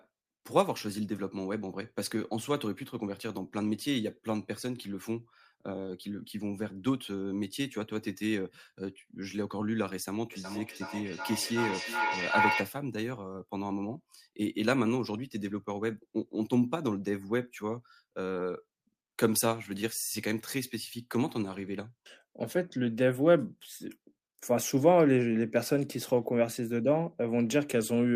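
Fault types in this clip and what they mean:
Feedback echo between two devices: a second device in the room replays the call into this microphone, so speech returns roughly every 400 ms, repeats piling up to about speech level.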